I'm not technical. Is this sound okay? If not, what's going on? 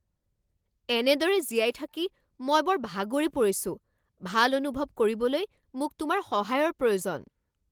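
Yes, no faults are audible, and the Opus voice compression carrying the speech leaves only light traces while keeping the full frequency range.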